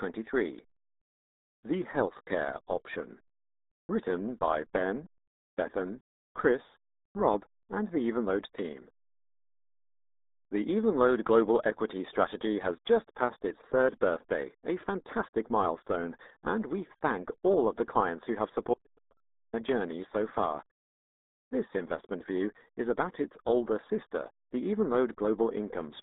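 Channel delay (comb filtering) runs through the whole speech clip. One channel arrives a fraction of a millisecond late, roughly 0.2 ms, and when the two are summed to mono, the parts they share cancel at evenly spaced frequencies. With a delay this short, the first notch lands around 3 kHz. The upper presence region is carved out, and the voice sounds hollow and slightly phasey, with a fixed, unchanging colouration.

The RealAudio 14.4 codec is also present from start to finish. The heavy damage fits an 8 kbit/s dial-up speech codec. The audible band runs from about 250 Hz to 3.7 kHz, and nothing survives above 3.8 kHz. The coarse coding leaves the speech muffled and gargly, and it compounds the dullness already left by the comb notch.

An audio dropout to a faint residue occurs from 18.74 to 19.53 s, lasting about 0.79 s. The speech cuts off abruptly mid-flow rather than pausing or fading. 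The gap holds only a faint trace of the signal, about 40 dB below its normal level. The return is equally sudden. The likely cause is a momentary loss of the wanted signal while the path after the break stayed live.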